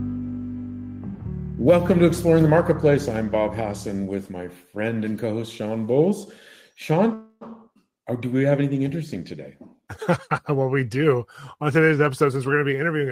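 At 7.13 s a call audio freeze sets in until 7.43 s: the last sound is held as a fading buzz or hiss for about 0.28 s, likely from packets stalling in transit, then audio resumes where it stopped, now 277 ms later. A spectrogram shows smeared, repeating bands, with no silent gap.

From 12.11 s to 13.07 s a jitter buffer speed-up plays the audio at 109% speed with pitch unchanged, as short pitch-period slices totalling about a tenth of a second are trimmed away. The waveform shows compressed timing, and a spectrogram shows harmonics kept level.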